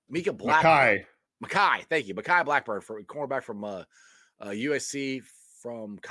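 No technical faults can be heard at any point in the speech, so there is nothing to describe in time order.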